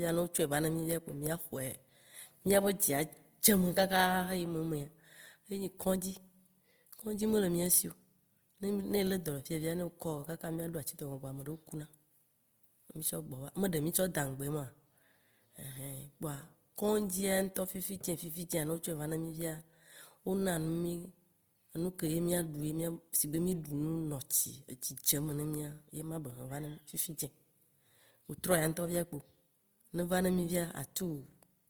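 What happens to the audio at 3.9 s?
Opus compression is audible at 3.9 s, as it is throughout the whole clip, most likely from encoding in the codec's music (CELT) mode at a low rate that sounds close to 24 kbps. Starved of bits, the encoder keeps each band's overall energy but fills the detail with folded copies of lower bands or with noise. The speech therefore comes across rough and grainy rather than swirly, with the damage plainly audible, even though content still reaches about 20.2 kHz.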